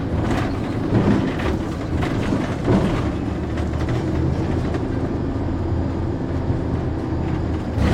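No technical faults are audible anywhere in the sounds.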